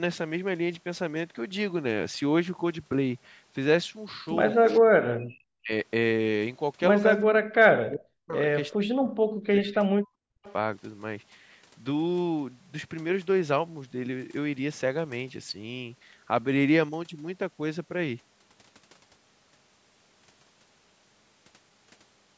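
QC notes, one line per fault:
4.78–4.87 s, 5.6–5.72 s, 7.25–8.36 s, 8.76–10.11 s and 10.28–10.43 s, speech suppressed in double talk: the talker's level collapses by roughly 40 dB, briefly in the short dips and for about a second each in the two longer stretches. The likely cause is the far side talking at the same moment. The echo canceller couldn't tell this talker apart from the loudspeaker echo, so it pulled everything down.
5.15–5.32 s, background gated by the echo canceller: the room sound sinks by about 12 dB for roughly 150 ms, then comes back. While the loudspeaker was playing, the canceller clamped the microphone hard, taking the ambience with it. It let go as soon as it judged the echo had passed.
10.43–10.53 s, echo leak: a faint, delayed copy of a voice, about 25 dB below the speech, slips through just as the last suppressed stretch ends. It trails the original by 397 ms. Its likely source is the loudspeaker on one side being picked up by that side's microphone, with the canceller leaving a residue that was sent back.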